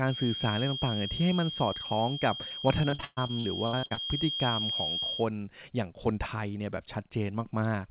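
A thin, steady whistle at 3.2 kHz sits behind this speech clip from the start until 5.29 s, swelling and fading slowly in level and only a little quieter than the speech itself. It is a feedback whistle, most likely from a loudspeaker-to-microphone loop held right at the edge of feedback, so a single tone keeps ringing without growing. The call's narrow sound, with nothing above 4 kHz, fits a telephone-band codec such as G.711, so the whistle sits just under that upper limit. Between 2.48 and 3.99 s the speech turns choppy and robotic, broken by more than a dozen short holes, the longest about 123 ms, with roughly a third of that stretch patched over. This is repeated packet loss: audio kept arriving late or not at all, and each gap was filled by stretching the last sound before the next one hit.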